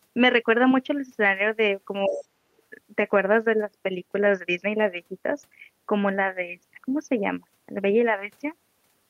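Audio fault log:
2.06–2.42 s, speech suppressed in double talk: the talker's level sinks sharply, by something like 25 dB at its lowest, and parts of the sound thin out and drop away in pieces, adding up to around a fifth of a second. This likely comes from the echo canceller hearing two voices at once and turning everything down rather than risk passing echo. Unlike a network dropout, the gaps follow the overlap with the other side.
2.07–2.24 s, other side's voice leaking through: a second, far quieter voice, roughly 25 dB below the talker, slips in for under a fifth of a second. Its likely cause is loudspeaker playback reaching the microphone and not being fully cancelled. It differs from crosstalk or a room echo of the talker because the intruding sound is a separate voice, and it appears only while the talker is being suppressed.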